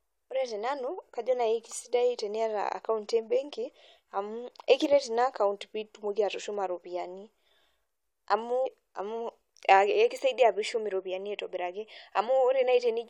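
A stream segment skip occurs at 8.65 s. The speech jumps abruptly forward at that point with a brief blip, and the continuity of the talk breaks as though a stretch of the recording were simply absent. The likely cause is that one segment of the segmented stream failed to arrive or load, and the player went straight on to the next one, dropping roughly a second or more of material without filling the gap.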